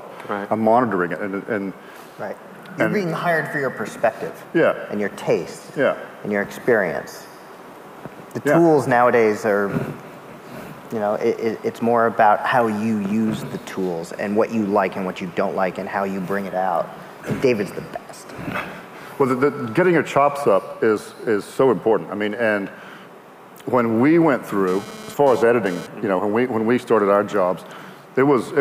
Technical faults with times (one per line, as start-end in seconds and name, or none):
24.68-25.87 GSM phone buzz